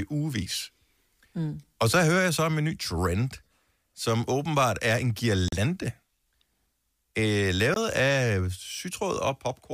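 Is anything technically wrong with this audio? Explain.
Yes. The speech has two short gaps at 5.48 to 5.53 s, just after "som åbenbart er en", and at 7.74 to 7.76 s. Each goes silent for about 41 ms and about 20 ms, then resumes further along, as if it had kept playing. This is likely a Bluetooth dropout: packets failed to reach the headphones in time and were discarded. The lengths fit two lost packets and one lost packet of about 20 ms each.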